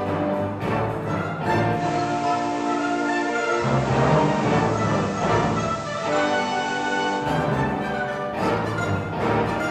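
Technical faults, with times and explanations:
1.73 to 7.28 s, digital radio blending to analogue: The receiver loses its digital stream and cross-fades to the FM broadcast of the same station, then fades back. Each blend takes about 123 ms. Hiss rises to roughly 20 dB below the programme. The level also shifts by about 2 dB, because the two paths are not matched.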